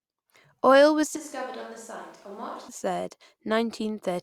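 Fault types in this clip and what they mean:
Switch to a distant microphone: from 1.17 to 2.68 s the speech suddenly goes roomy and hollow, loses its low end, drops about 10 dB and picks up room noise around 25 dB under it, likely because the close mic dropped out.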